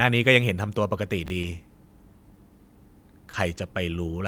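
Chunks out of order at 1.26 to 1.30 s in this speech recording: a 20 ms chunk plays one slot late, swapping with its neighbour and leaving a brief jumbled moment. Short concealed packet loss at 1.41 to 1.45 s and 3.31 to 3.35 s: each time about 20 ms went missing, and the decoder filled the gap by extending the preceding sound, heard as a small smear.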